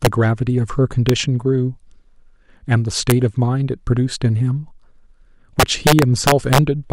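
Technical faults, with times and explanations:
0.05 s, 1.09 s and 3.10 s: integer overflow. Brief cracks occur where speech peaks reach or exceed full scale by up to about 2 dB. Instead of being limited, those samples wrap around to the opposite extreme, so each waveform top jumps across the whole range.
5.60 to 6.58 s: integer overflow. The speech is driven about 5 dB past the limit, so many peaks wrap repeatedly, causing a run of violent, harsh cracks far sharper than ordinary clipping.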